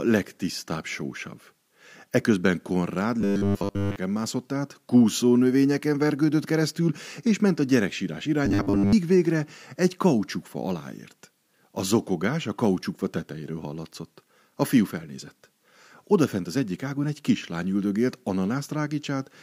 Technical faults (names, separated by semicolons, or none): robotic sound from repeated short buffers